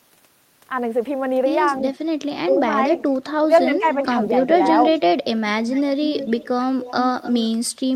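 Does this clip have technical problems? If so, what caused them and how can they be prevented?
Yes. Speech suppressed in double talk occurs at 2.43–2.66 s and 3.46–3.84 s. The level sinks by around 10 dB for about a fifth of a second each time, likely because an echo canceller mistook both talkers for echo. Unlike a packet dropout, the sound dips rather than vanishing. A full-duplex canceller with better double-talk detection prevents it.

Echo leak appears at 2.95, 3.91, 4.93, 5.71, 6.09–6.48 and 6.82–7.69 s. It is a distinct copy of the speech returning 316 ms later at first, then 288 ms, about 10 to 20 dB down. This is likely loudspeaker sound that the far end's canceller failed to remove. Room reverberation would instead be a smooth tail. Headsets or a better-tuned canceller at the loudspeaker end prevent it.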